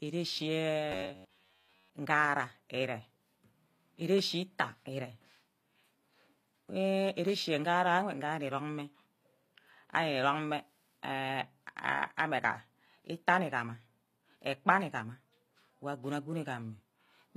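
From the first moment to the end, the treble has a gritty, metallic edge: s sounds come out lispy and smeared, and the upper frequencies sound bright but synthetic. This plainly audible damage is likely HE-AAC compression, at a setting that fits a low bitrate of around 24 kbps. Only the lower spectrum is actually coded. The top end is rebuilt by copying lower bands upward under a coarse envelope, so its harmonics no longer match the real ones.

From 0.92 to 1.93 s the speech turns into a rigid, metallic buzz pitched at about 93.8 Hz. It still roughly follows the rhythm of the speech but loses its natural movement. This is likely robotic sound from repeated short buffers. Audio arrived too seldom, so playback kept repeating a slice of roughly 10.7 ms, and that repetition rate sets the fixed pitch. Most of the real audio in that second was skipped and replaced by the repeats.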